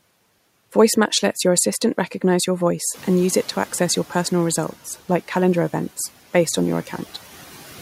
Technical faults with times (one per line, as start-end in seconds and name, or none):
2.94-4.34 noise suppressor catching up